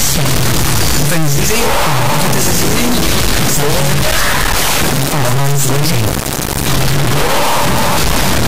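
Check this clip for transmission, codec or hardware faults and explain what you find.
One serious fault runs through the whole clip. Integer read as float throughout: 32-bit integer samples are decoded as 32-bit float, so values slam between silence and the clipping limit, heard as a harsh, loud buzzing square wave.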